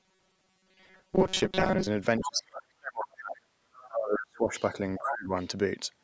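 From 0.01 to 1.87 s the speech turns into a rigid metallic buzz pinned at 188 Hz: robotic sound from repeated short buffers. The likely cause is starved playback looping a roughly 5 ms slice, which fits a buffer of about that length. Most of the audio in that stretch is repeats. A spectrogram shows evenly spaced harmonic stripes at multiples of 188 Hz, and the waveform shows near-identical cycles.

Speech suppressed in double talk follows at 2.19 to 3.35 s, 3.61 to 4.55 s and 4.98 to 5.33 s. The talker's level sinks by up to about 35 dB, then about 30 dB and about 25 dB. This is likely an echo canceller ducking everything while both sides speak. The waveform shows notched, collapsed envelopes, and the spectrogram shows faded columns.

The other side's voice leaking through appears at 2.18 to 2.39 s at about 10 dB below the talker, then as fainter scraps at 3.81 to 3.89 s, 4.52 to 4.64 s and 5.42 to 5.46 s, down to about 35 dB below. 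This is likely loudspeaker residue the canceller missed. The spectrogram shows thin, separate harmonic traces under or beside the main voice.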